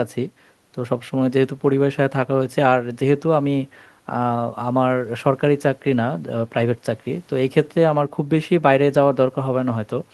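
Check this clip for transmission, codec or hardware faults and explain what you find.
Nothing stood out on listening to this speech recording that would point to a problem in how it was sent, encoded or captured.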